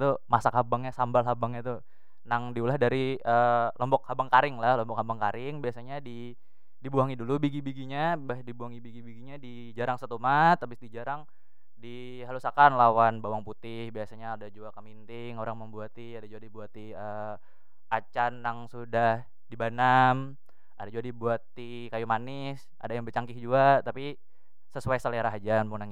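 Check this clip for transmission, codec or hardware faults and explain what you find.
A DC offset runs through the whole speech clip: the waveform sits shifted off zero by a constant of about -38 dBFS. It isn't audible as a tone, but it eats a little headroom and appears as steady energy at the very bottom of the spectrum.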